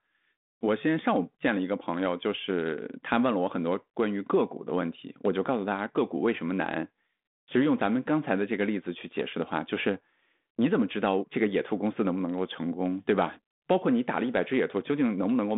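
No technical faults are present.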